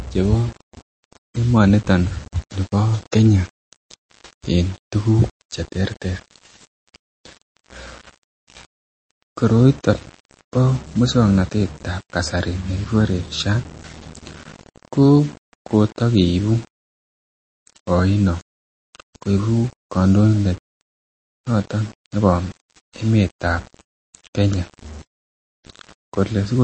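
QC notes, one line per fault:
Throughout: low bit depth without dither. Grainy distortion sits on the speech, with a noise floor roughly 25 dB below it. The grit rises and falls with the speech because the error follows the signal. No dither turns it into a steady hiss. Quiet tails go rough as they fall toward the smallest steps. The likely cause is rounding to very few levels, which fits about 6 bits.
Throughout: MP3 compression. The speech sounds watery and swirly, and the codec damage is plainly audible. Nothing is present above 8.3 kHz, so the top end stops at a fixed edge. Weaker frequency lines switch on and off from frame to frame, which causes the swirl. Attacks smear. The likely cause is a low-bitrate MP3 encode, which fits around 30 kbps, too little for the finer detail.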